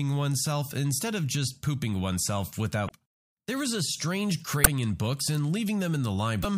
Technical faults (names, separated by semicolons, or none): damaged data in a compressed stream